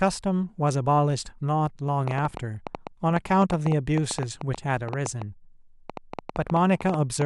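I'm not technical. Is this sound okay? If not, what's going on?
No. From 2.08 s to the end at 7.23 s there is a train of clicks: around 40 similar ticks, about seven a second at an uneven pace, heard even in pauses. Unlike a single pop, it keeps going, likely from electrical interference or a faulty connection or power supply.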